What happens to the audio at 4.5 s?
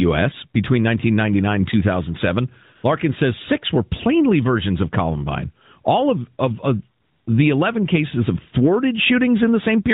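Nothing goes wrong at 4.5 s: the speech there runs on intact, carried through the AMR narrowband mobile codec with its usual band limit at 4 kHz and only light coding texture.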